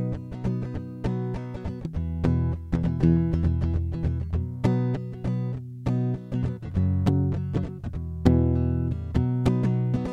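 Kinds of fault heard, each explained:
No technical faults are audible anywhere in the music.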